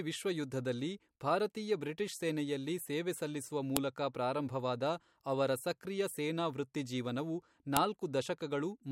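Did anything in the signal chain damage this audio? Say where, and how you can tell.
Yes. The damage happened at the storage or streaming stage, where the file header was played as audio. Sharp, loud snaps land at 3.77 s and 7.77 s, exactly 4 s apart, which fits 4-second pieces being joined with each header left in. Those header bytes become a burst of garbage samples at every seam. Unlike buffer-underrun clicks or dropouts, nothing goes missing, and the snaps keep a rigid spacing whatever the speech is doing.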